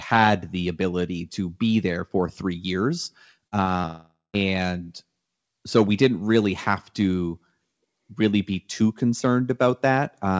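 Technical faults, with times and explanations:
3.48 s, 3.64 s and 3.82 s: short concealed packet loss. Just after "there for three years", three brief gaps of about 40, 20 and 20 ms never reached the decoder in time. Each time, the receiver filled the hole by extending the preceding sound, following its pitch or substituting shaped noise, and then blended back into the real signal. This produces quick smears and wobbles clustered within about a third of a second.
3.86 to 4.35 s: long network dropout. Directly after the third glitch, close to half a second of audio is missing. The receiver first stretches the last sound into a fading buzz or hiss, and then roughly 150 ms of near-silence remains before normal sound resumes, with the lost portion skipped rather than delayed. This is likely caused by the network briefly stopping delivery. The audio travels over the G.722-coded call path, which is band-limited to 8 kHz.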